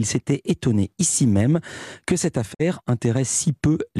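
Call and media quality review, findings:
Digital broadcast dropout, 2.53–2.61 s, after "ici même que cette". Receiver lost signal or failed frame checksums, then muted until valid frames resumed. Speech fades out over 20 ms, then silence; 48 ms of programme lost, consistent with two dropped frames.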